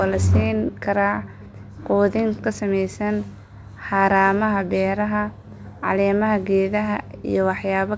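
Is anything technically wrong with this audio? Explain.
No, nothing's wrong here; the speech has simply come over a normal call path, and the sound stopping at about 8 kHz fits the wideband G.722 codec running at 64 kbps.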